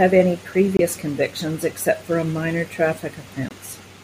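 Corrupt frame muted at 0.77 s and again at 3.49 s: at each point the speech drops abruptly into silence, lasting 44 ms before "convictions except for a" and 42 ms in the second instance. Bit errors damaged compressed frames, the decoder rejected them, and the player substituted silence. The length of each gap points to one or two lost frames. Playback resumes on schedule afterwards, so the timing of the speech is preserved.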